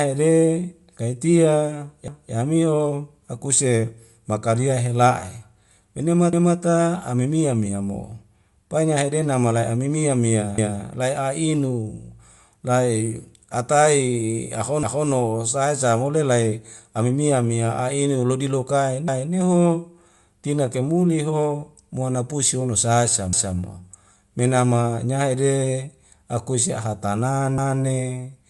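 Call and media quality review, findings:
Band-limited, grainy speech throughout; likely Bluetooth LC3 compression. Codec zeroing upper spectrum, refilling with noise. Nothing above 11.5 kHz. Breathy, gritty edge on the voice, damage plainly audible. Character fits a 48 kbps stream with 10 ms frames.

Overlapping chunks at 2.08, 6.33, 10.58, 14.83, 19.08, 23.33 and 27.58 s. Chunker or stream reassembly with each 4 s chunk starting 250 ms before the previous one ends. That 250 ms replays at every join as a stutter, e.g. before "ame mia mia mo", before "sae sa wole", after "pusi hono sae sa".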